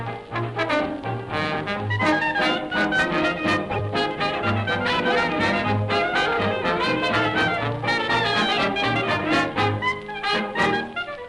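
A corrupt frame decoded appears three times. From 3.71 to 3.76 s, roughly two frames are damaged. From 4.87 to 4.90 s, about one frame is hit, and this is the loudest of the three. From 10.85 to 10.89 s, around two frames are hit again, but the error sits far lower in level. Each time, flipped bits were decoded as if valid. Misread gains or codes put energy at wrong frequencies, giving a brief blip or burst.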